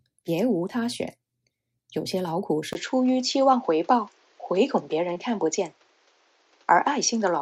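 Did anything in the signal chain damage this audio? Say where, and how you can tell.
Yes. From 2.73 s to the end, the capture side likely switched to a poorer input device. After a 20 ms gap at that point, the speech loses everything above 7.6 kHz, so it turns duller and boxier. A new background noise floor also appears, roughly 35 dB below the speech, while the overall level stays about the same. The change in tone and noise at a single instant points to a different microphone path, not gradual processing.

At the network stage, a short concealed packet loss occurs between 5.13 and 5.17 s. About 20 ms of audio never arrived in time, and the decoder covered the hole with 20 ms of synthesised sound, extrapolated from whatever it had just played. It then cross-faded back into the real signal. The result is a brief smear in the speech, where a quick sound can be blurred or lost inside the patched stretch.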